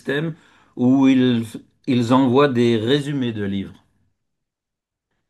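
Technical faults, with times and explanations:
0.16–5.28 s, clock slip clicks: a steady stream of faint ticks runs under the speech, roughly ten a second, several dozen in all, and they stand out most on the louder, brighter stretches. That even spacing is the giveaway. It's likely two devices running on separate, unsynced clocks, off by a few hundred parts per million, so every time the drift adds up to a whole sample, one sample gets dropped or repeated and you hear a tiny click.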